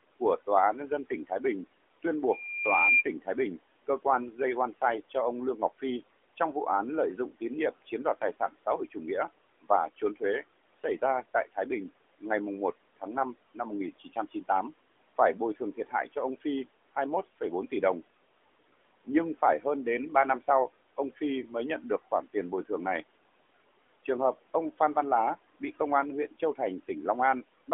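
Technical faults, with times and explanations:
0.2 to 27.7 s, speech cut by the noise suppressor: four stretches, 0.2 to 2.04 s, 3.22 to 17.72 s, 19.05 to 21.2 s (ending just before "mới nhận được") and 24.07 to 27.69 s, where the suppressor treats weaker parts of the speech as noise and pulls them down with the background, by up to about 15, 18, 14 and 13 dB. Soft consonants and word endings go faint or swallowed, briefly in most stretches, but for about a second and a half in total in the long middle stretch.
2.29 to 3.04 s, loudspeaker feedback squeal: a single tone at 2.4 kHz swells over roughly 0.7 s until it sits around 5 dB above the speech, then stops. The microphone is picking up the loudspeaker it feeds, and at 2.4 kHz the loop gain exceeds one, so that frequency keeps amplifying itself each time around the loop. The result is one narrow, rising squeal rather than broadband noise.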